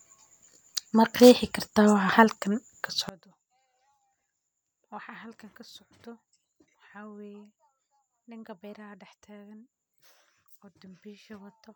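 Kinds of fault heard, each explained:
One channel inverted: From 3.09 s to the end, the speech suddenly falls by about 23 dB and stays faint. The likely cause is one stereo channel with reversed polarity. When the two channels are summed to mono, the material they share cancels. Centred speech carries most of its energy equally in both sides, so nearly all of it disappears. What remains is only the small difference between the channels, heard here as a weak residue of the voice.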